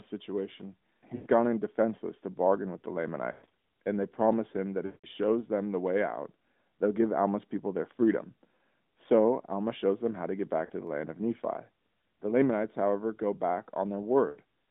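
At 1.16 to 1.27 s, just before "gone in", lost AMR speech frames leave 100 ms of decoder concealment. The repeated pitch and spectral settings decay into a drawn-out, fading warble, which fits about five 20 ms frames. Similar lost frames follow at 3.32 to 3.52 s (scattered gaps, longest 120 ms, before "and they promise him"), 4.86 to 5.06 s (180 ms), 10.66 to 10.72 s (40 ms) and 14.30 to 14.38 s (60 ms). Each one stretches the sound, fades it and then recovers roughly through the narrowband line.

At 1.64 s, between "gone in" and "to bargain with the", a single sharp click is likely caused by dropped samples. A few samples are missing, so the waveform jumps abruptly.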